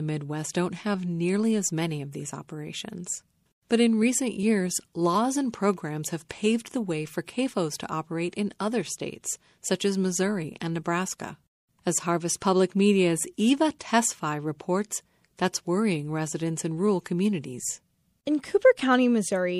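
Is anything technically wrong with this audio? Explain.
Yes. Throughout the speech there is plainly audible damage of the kind left by MP3 compression, which fits a low bitrate of around 64 kbps. Short of bits, the encoder has likely cut the treble at a fixed ceiling and dropped weak frequency lines that flicker on and off between frames, so the sound turns watery and swirly, with metallic chirps on s sounds and smeared onsets. A spectrogram shows a flat upper edge and patchy, twinkling holes beneath it.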